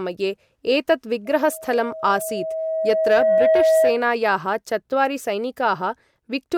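From 1.25 s to 4.06 s the speech is overtaken by a loudspeaker feedback squeal. A microphone is picking up the loudspeaker it feeds, and at 641 Hz the loop gain has passed one, so that tone feeds on itself. Unlike a steady interfering tone or mains hum, it starts faint and swells over roughly two seconds into a single howl that ends up louder than the speech.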